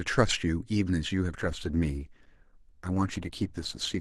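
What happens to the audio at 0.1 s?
Nothing goes wrong at 0.1 s; the speech there plays through intact, with no audible fault at that moment.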